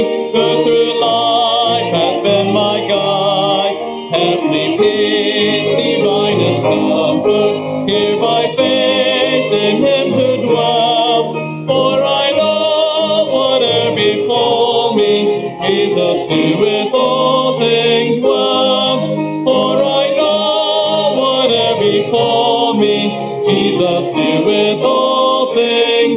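Gain pumping runs throughout: the gain swings by roughly 10 dB as it is pulled down under loud sounds, likely from excessive input gain driving a fast limiter, over a narrowband call path cutting everything above 4 kHz.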